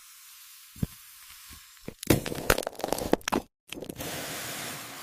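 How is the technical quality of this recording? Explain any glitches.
One glitch affects the technical quality, a single brief discontinuity near the end.

An overlap between stream segments occurs at 3.67 s. Two adjacent chunks of the stream claimed the same stretch of time, so the player trimmed the shared portion. That material was never actually duplicated, so about 5 ms of real audio was lost. The waveform jumps straight from one point to a later one, heard as a small click or a barely noticeable skip. It happens only once, consistent with a boundary between segments of around 6 s.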